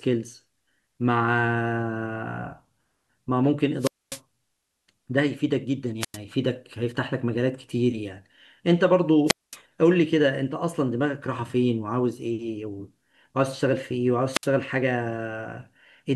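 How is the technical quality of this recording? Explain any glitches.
The speech has four brief wireless microphone squelch dropouts, at 3.79 to 4.20 s, 6.00 to 6.17 s, 9.26 to 9.57 s and 14.31 to 14.48 s. In each, the FM radio link fades, a short rise of hiss or static comes through, and the receiver's squelch mutes the output for about 250, 97, 220 and 62 ms before the voice returns. The hiss ahead of the silence is what separates this from a digital dropout, which cuts straight to silence.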